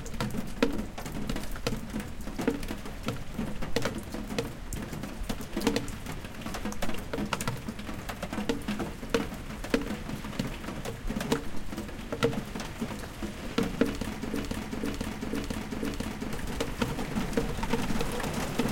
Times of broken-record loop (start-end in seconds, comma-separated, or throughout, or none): 14.34-16.33